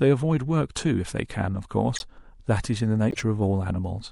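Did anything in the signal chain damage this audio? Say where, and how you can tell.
Yes, and the damage comes from the codec stage. Across the whole clip the speech has a watery, swirling texture, with dulled treble and smeared consonant attacks, which points to lossy encoding, likely MP3 compression at a low bitrate around 64 kbps. The encoder runs short of bits, so it cuts the top end and drops weak frequency components that flicker between frames. Unlike a plain low-pass filter, the loss here is unsteady and metallic rather than a clean, stable dullness.

The second fault happens at decoding: a corrupt frame decoded, heard twice as short bursts, from 1.96 to 2.02 s and from 3.11 to 3.21 s. The second burst is longer, spanning a few frames against a couple for the first, and louder, peaking around -15 dBFS against roughly -20. Damaged bits gave the decoder wrong gains or codes, so energy lands at unrelated frequencies for about a frame's length. 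A dropout would leave silence or a gap instead, and a plain click would be far shorter than a frame.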